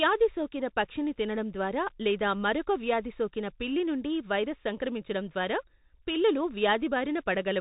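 Speech recorded through a Bluetooth CVSD headset codec throughout. Nothing above 3.8 kHz survives. The one-bit slope coding, which fits a 64 kbps link, leaves plainly audible scratchy sibilants and granular hiss.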